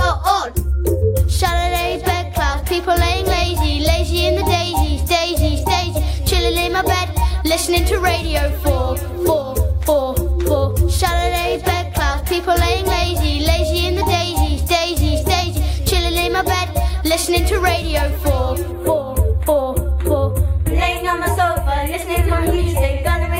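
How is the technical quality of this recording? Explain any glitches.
There is one glitch. From 18.72 s to the end, the sound turns hollow and slightly dull: channel delay with comb filtering. One channel lags the other by only a few samples, around a tenth of a millisecond, and when both are summed to mono their common content cancels at evenly spaced frequencies, the first notch falling near 5 kHz. Unlike a flanger or phaser, these notches stay fixed rather than sweeping, and unlike a simple low-pass, the top end is notched rather than smoothly rolled off.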